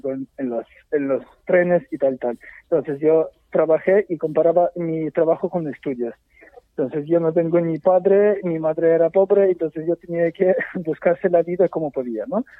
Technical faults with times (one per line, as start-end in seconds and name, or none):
none